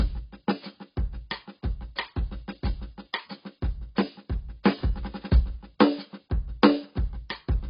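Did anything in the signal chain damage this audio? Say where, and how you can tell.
Yes, the codec stage: throughout, the music stops dead above 5.2 kHz on a spectrogram, with dull, smeared, warbling texture, which fits heavy AAC compression, likely AAC-LC near 16 kbps.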